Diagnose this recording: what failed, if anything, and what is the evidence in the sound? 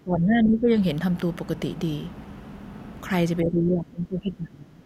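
The speech sinks by about 15 dB from the start to 0.77 s, then by about 20 dB from 3.43 s to the end, thinning and breaking up. This is likely speech suppressed in double talk. The echo canceller in call processing couldn't separate near speech from loudspeaker echo and turned both down.

A single sharp snap sits on top of the speech at 0.98 s, lasting about a millisecond. This is likely an electrical switching spike in the analogue wiring, where a nearby switch, motor or static discharge arced briefly and the line picked it up.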